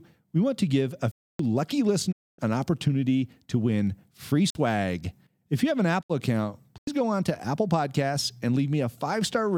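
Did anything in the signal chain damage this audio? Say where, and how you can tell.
Yes. Three hard-edged holes are a block of digital silence at the driver or buffer stage: 1.12–1.39 s, 4.50–4.55 s after "opportunity to win free", and 6.78–6.87 s. The 93 ms gap fits a 4096-sample buffer left unfilled, so zeros were output.

Two brief fades to silence, about 20 ms each, are a digital broadcast dropout in reception: 2.11–2.40 s, just before "an opportunity to win", and 6.01–6.12 s after "you have an". The receiver muted over lost or corrupt frames, dropping about 256 ms and 64 ms of programme.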